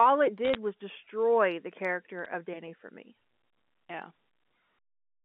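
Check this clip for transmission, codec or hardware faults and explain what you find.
There are two bursts of bit errors on a digital phone line. From 0.45 to 0.55 s, just before "was destroy the character", sharp ticks crackle over the speech, and more bit errors follow at 2.25 s, right after that phrase. Each flipped bit corrupts one logarithmically coded sample, and hits on the sign or high bits produce the clicks. The error rate is around 0.4 percent in the first burst and lower in the second, all carried over the narrow 200 Hz to 3.5 kHz telephone band.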